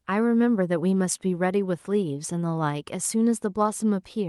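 No faults found in the speech; the WebRTC call path works as expected, its top end rolling off at 12 kHz, which fits an Opus stream at a moderate bitrate.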